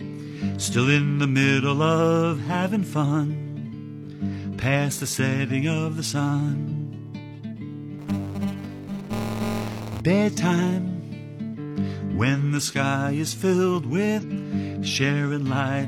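Short chirps and blips break into the audio at 0.32 s, 2.50 to 2.54 s, 6.68 to 6.72 s, 11.54 to 11.59 s and 14.19 to 14.24 s. These are damaged data in a compressed stream: corrupted or missing bytes make the decoder misread frames, lose sync and jump to the next valid frame header, discarding a sliver of audio. From 7.99 to 10.01 s a robotic buzz at 200 Hz rides on the signal. That is buffer tearing: the writer and the playback hardware have drifted out of step on a ring buffer, so every cycle splices in roughly 15 percent of audio from about 20 ms earlier, with hard joins on both sides. The 200 Hz repeat points to periods of around 5 ms in a ring about 20 ms long.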